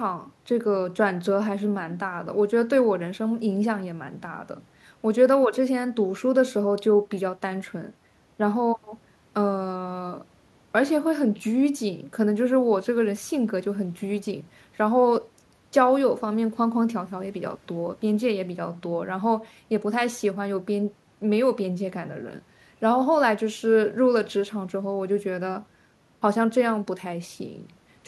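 Nothing in this bit of speech stands out as a technical problem; there's no fault to point to anywhere along it.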